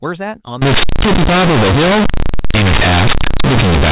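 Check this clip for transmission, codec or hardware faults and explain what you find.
There is one fault, a decoding error. Companded audio read as linear runs from 0.62 s to the end: mu-law bytes play as raw linear 8-bit samples without expansion, giving loud, buzzy distortion and heavy noise in pauses.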